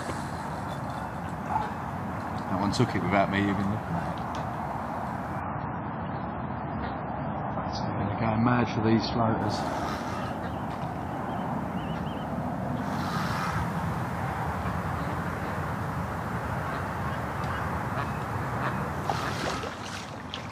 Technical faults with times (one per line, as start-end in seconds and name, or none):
5.41-9.41 adaptive stream at a lower bitrate